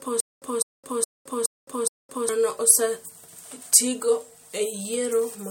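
From the very start until about 2.29 s, the speech stutters with silent gaps: a short burst of about 203 ms plays, drops to dead digital silence for about 215 ms, then the same burst returns, repeating five times at an even 418 ms period. The stutter is already under way when the clip begins. This is likely a stalled player or stream replaying its last fragment at each retry, and whatever should have sounded in that stretch is lost.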